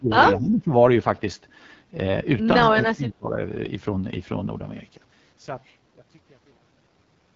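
A speech recording that sounds rough and raspy throughout, with nothing above about 7.3 kHz. This is the AMR wideband (HD Voice) codec at one of its lowest rates, which fits the 8.85 kbit/s mode. From 0 to 0.72 s and again from 2.72 to 3.37 s the voice dips, by around 20 dB. This is likely speech suppressed in double talk, where the echo canceller turned the talker down while the other side spoke.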